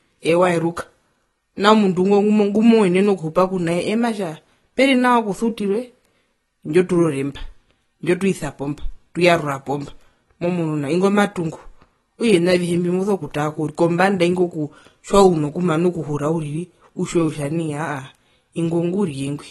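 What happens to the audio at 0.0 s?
From the very start, the speech carries AAC compression damage, and it lasts the whole clip. Nothing is heard above about 12.1 kHz, so the top end sounds dull. The codec has likely discarded detail it judged inaudible, keeping too few bits for the rest. That leaves gaps and substitute noise in the spectrum. Sibilants turn fizzy and smeared, and held sounds warble. The damage is plainly audible and fits a low bitrate near 32 kbps.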